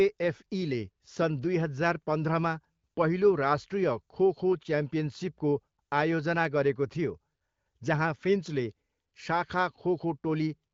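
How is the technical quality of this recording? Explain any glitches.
No glitches or technical faults can be heard here.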